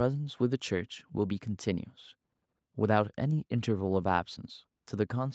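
No technical faults are audible in this speech.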